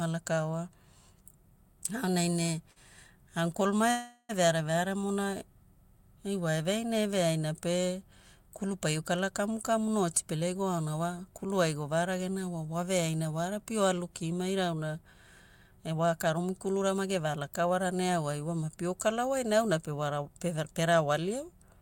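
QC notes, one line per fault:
2.71 to 2.79 s, short stall from a late packet: one packet arrived late and the jitter buffer briefly ran dry, so the receiver held the last bit of speech for about 48 ms until the packet came in, then carried on from the same point. Nothing is lost, but that sound is drawn out slightly, with a faint buzz or dip where it is stretched, and everything after it lands about 48 ms later.
3.91 to 4.32 s, call audio freeze: the speech stops moving forward and the last sound is continued as a fading buzz for roughly 380 ms, ending in about 50 ms of silence, before the speech resumes with "veare veare". The likely cause is packets held up in transit, which left the jitter buffer empty. When they arrived, playback picked up where it stopped, so a gap was inserted rather than speech removed, and the rest of the clip runs about 377 ms later.
9.97 to 11.26 s and 15.90 to 18.09 s, jitter buffer speed-up: in both stretches the speech sounds hurried but keeps its pitch. 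It plays about 11% fast in the first, before "kulu ai govaragena", and about 9% fast in the second, before "ne pio kala wai". The buffer had built up more delay than it targets, so the receiver cut out many short pitch-period slices in a row. Roughly a seventh of a second is removed in the first run and about a fifth in the second.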